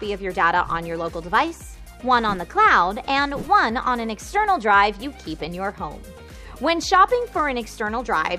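Nothing stood out as a technical fault on listening.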